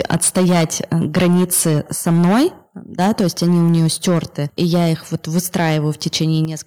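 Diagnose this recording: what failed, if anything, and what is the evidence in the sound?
Microphone overload appears at 0.0–1.78 s, 2.06–2.46 s, 2.99–4.19 s, 4.6–5.77 s and 6.06–6.23 s, at the converter stage. The peaks are flattened with a harsh, crackling edge, driven about 10, 9, 8, 6 and 2 dB past full scale. The worst stretch, near 2.1–2.5 s, has roughly a third of its samples squared off. The likely cause is input gain set too high, so the waveform tops hit the converter's ceiling and are sliced off.

Microphone volume stepped down is heard at 0.14 s, 3.21 s and 6.45 s, in call processing. Each time, the speech and the background fall together in one abrupt step, by about 3, 3 and 8 dB, with no gradual fade. The first two land inside distorted stretches, and the largest drop follows the final burst of clipping. This is likely automatic gain control reacting to the overload by cutting the device's input level.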